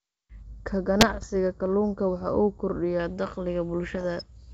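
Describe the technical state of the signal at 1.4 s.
Channel delay (comb filtering), 0.42 to 3.00 s: one channel lags by roughly 0.2 ms, so the mono sum cancels at evenly spaced notches starting near 3 kHz, leaving the speech hollow and phasey.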